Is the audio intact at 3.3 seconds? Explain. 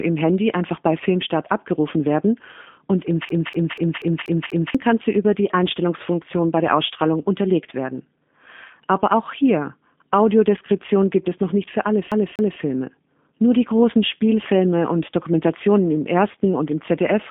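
No. From 3.29 to 4.75 s the same 0.24 s fragment stutters six times with a brief mute at each jump, the CD stuck on one turn, where a scratch keeps throwing the laser back one track. Underneath, the speech sounds narrow, rough and synthetic, with nothing above 3.8 kHz: G.729 codec damage, which fits an 8 kbit/s G.729A stream rebuilding speech from a filter and sparse pulses.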